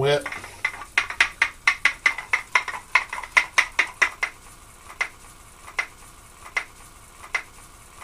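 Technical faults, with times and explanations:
4.89 s to end, broken-record loop: a fragment of about 0.78 s repeats exactly, back to back, four times until the clip stops. The repetition likely comes from a stalled player or stream resending its last held piece, so the audio meant for that stretch is lost.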